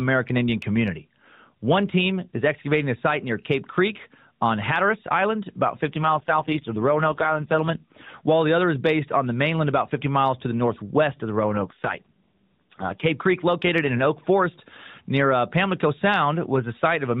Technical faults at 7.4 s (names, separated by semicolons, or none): AMR rate drop